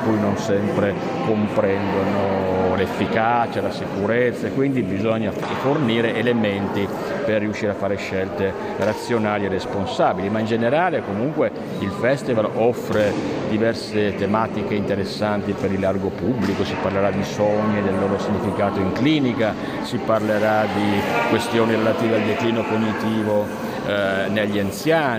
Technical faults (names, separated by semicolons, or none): pre-emphasis left on